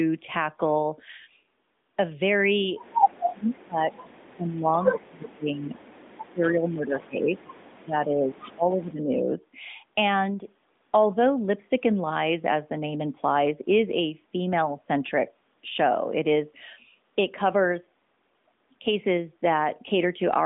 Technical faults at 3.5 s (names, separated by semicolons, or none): speech suppressed in double talk; echo leak